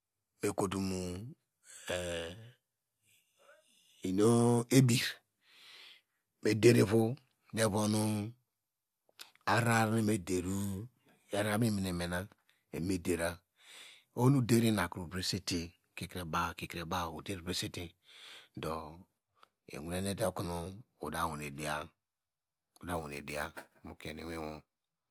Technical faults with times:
22.95-25.10 sample clock jitter

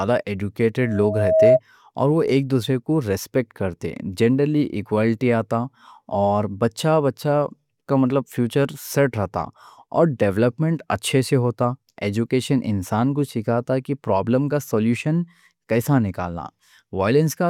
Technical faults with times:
0.81-1.60 loudspeaker feedback squeal

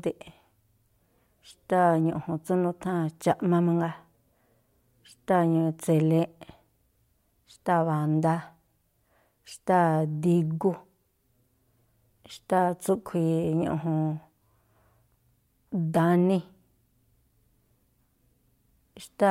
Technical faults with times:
none

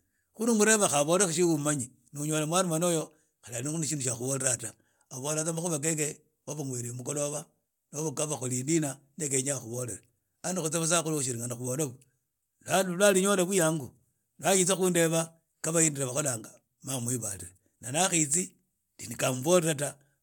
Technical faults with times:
none

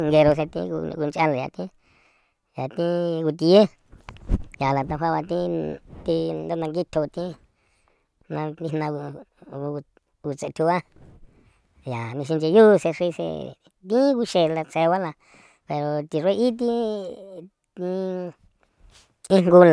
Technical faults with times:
0.00-19.72 wrong sample rate

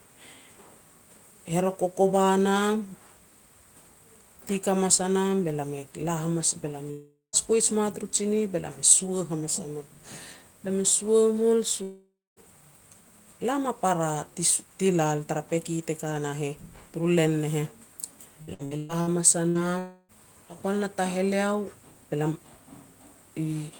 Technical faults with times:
6.91-7.36 long network dropout
11.83-12.39 long network dropout
18.42-19.10 repeated packet loss (robotic sound)
19.49-19.58 burst of packet loss
19.79-20.12 long network dropout

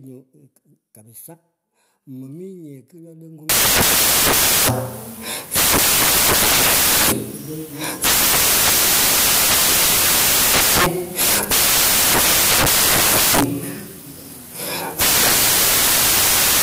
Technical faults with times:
3.49-16.62 samples built from the wrong bytes

